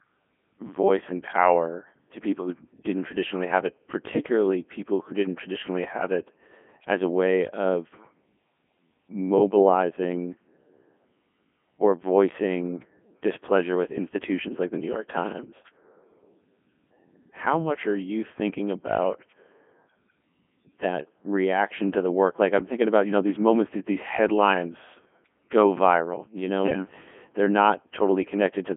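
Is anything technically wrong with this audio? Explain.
Yes. Codec 2 vocoder runs throughout: only pitch, voicing, energy and spectral envelope survive, resynthesised from sine waves, leaving heavily robotic, buzzy speech, consistent with its 3.2 kbit/s mode, confined to 200 Hz–3.4 kHz with nothing above 3.6 kHz.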